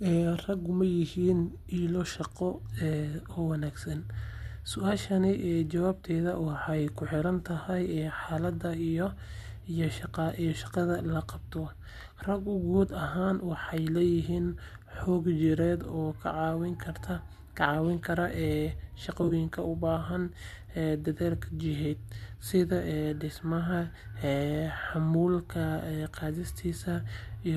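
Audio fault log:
0.46 to 0.49 s: AAC frame loss with concealment. A brief smeared, noisy patch, about 20 ms of missing audio, which fits two lost frames. The decoder filled the gap by reusing the last good spectrum with altered phase, so the speech turns phasey rather than dropping out.
19.23 to 19.33 s, just before "u baahan": AAC frame loss with concealment. About 40 ms is lost in pieces scattered over 80 ms, the longest run around 30 ms. Each gap is patched from earlier spectra, giving a smeared, noisy patch. The light grain of the likely low-delay AAC compression carries through the rest of the clip.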